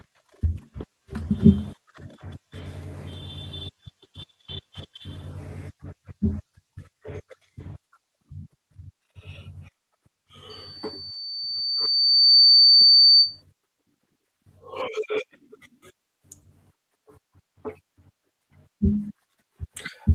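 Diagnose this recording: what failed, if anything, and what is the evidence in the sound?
Loudspeaker feedback squeal in the acoustic loop: a 4.6 kHz tone swells by itself over about two seconds from 10.50 s to 13.42 s, unlike a steady hum.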